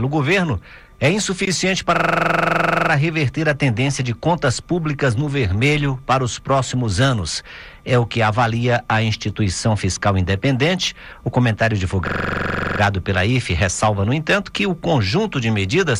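A system hang loop occurs from 1.96 to 2.90 s and from 12.08 to 12.80 s. A frozen system replays one 42.67 ms slice, fitting a 2048-sample buffer, as a machine-gun stutter at 23.4 Hz.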